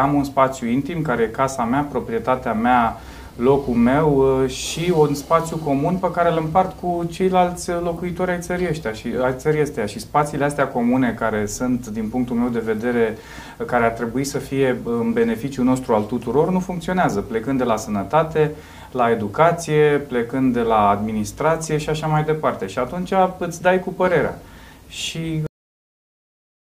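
At 25.47 s the audio has a cut-off end: the final buffers were never written out, so the sound stops mid-event and drops straight to digital silence with no decay. That silence holds for the remaining 1.3 s of the clip.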